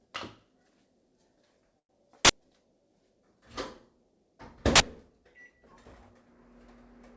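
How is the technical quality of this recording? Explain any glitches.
The recording passed through a call path with nothing above 8 kHz, which fits a wideband codec such as G.722. It has three glitches: one brief stall and two bursts of digital noise.

Short stall from a late packet, 1.79 to 1.91 s: a packet arrived late and the jitter buffer ran dry. The receiver held the last bit of sound for 100 ms until the packet came, then resumed where it left off. Nothing is lost, but everything after this point plays 100 ms later. The held sound comes across as a brief freeze with a faint buzz or dip.

Uninitialised buffer, 2.25 to 2.29 s and 4.76 to 4.80 s: in each case a block of about 46 ms went to the output before any audio was written into it. That length fits a 2048-sample buffer. The player read whatever data was left in that memory as if it were samples. Each event is a loud, harsh burst of digital noise, and it may carry a high tonal edge.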